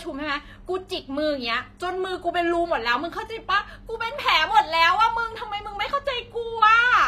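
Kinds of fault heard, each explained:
HE-AAC compression: throughout the speech, the treble sounds bright but synthetic, and s sounds come out gritty and metallic. The likely cause is HE-AAC at a low bitrate, consistent with about 24 kbps. Only the lower spectrum is properly coded. The upper range is regenerated by copying lower bands upward under a coarse envelope, so the rebuilt harmonics do not line up with those below the crossover, and the damage is plainly audible.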